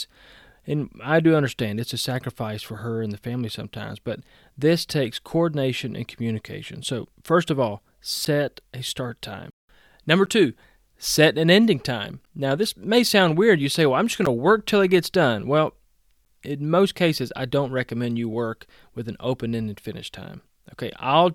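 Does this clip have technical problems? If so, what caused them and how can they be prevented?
Yes. From 8.25 to 16.26 s, between "first of all" and "in most cases I", there are periodic USB or driver dropouts. About five ticks, 2.0 s apart, each one roughly 10 ms of silence where a background task stalls the bus or driver. Finding and disabling that task, or moving the interface to its own USB controller, should prevent it.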